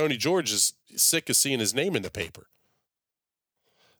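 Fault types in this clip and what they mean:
Loose connector crackle: a worn or dirty contact somewhere in the chain keeps making and breaking, so the signal gets chopped up. Here it's a short, ragged burst of scratchy crackle over the speech, from about 2.04 to 2.29 s.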